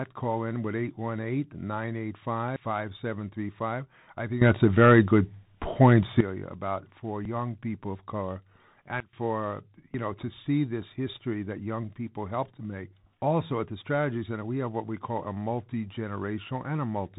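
The speech runs through a Bluetooth CVSD headset codec from start to finish. The band stops at about 3.8 kHz, so the audio sounds narrow and telephone-like. The one-bit delta coding, which fits CVSD's 64 kbps stream, is plainly audible. A granular hiss sits under the speech, sibilants come out scratchy, and loud bright passages distort where the adaptive step size cannot keep up with the waveform.

At 2.56 s the sound jumps forward, with no gap of silence. This is a dropped buffer (overrun), likely the capture side failing to read its samples before the hardware overwrote them. Around 100 ms of audio is missing, and the two sides are joined directly.

From 4.42 s to 6.21 s a sudden gain jump raises the level by about 13 dB. The speech and the background noise step up together, and the level then falls back just as abruptly. The hard edges point to a gain change applied from one sample to the next, probably a setting change without a ramp.

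At 7.25 s a second dropped buffer (overrun) causes another skip. Around 40 ms is lost, likely the same failure to collect samples in time.

From 9.00 s to 9.13 s a sudden gain jump of about 19 dB downward briefly sinks everything, noise floor included, before it snaps back. The switch is instantaneous rather than faded, most likely an unramped digital gain step.

At 9.94 s a third dropped buffer (overrun) skips, losing around 40 ms where the samples were likely overwritten before being read.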